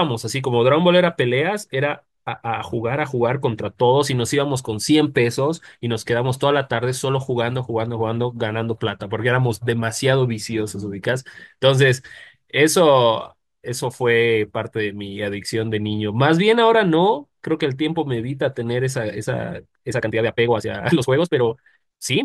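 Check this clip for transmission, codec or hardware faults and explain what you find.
One fault is present, a time-stretched section from 19.49 s to 22.24 s: the speech abruptly runs 1.53 times faster at unchanged pitch, sounding rushed, likely from software dropping short segments.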